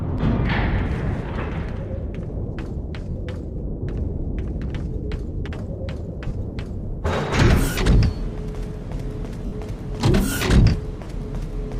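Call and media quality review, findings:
Short noisy smears replacing the sound at 1.04–1.07 s, 3.10–3.16 s, 6.28–6.31 s, 9.46–9.52 s and 11.03–11.06 s, lasting 30 ms and 60 ms alternately. Lost LE Audio frames on the Bluetooth link, with the durations fitting runs of 10 ms LC3 frames. The LC3 decoder's concealment repeats the last good spectrum with randomised signs, so detail becomes noise-like, and it fades that fill as a gap continues.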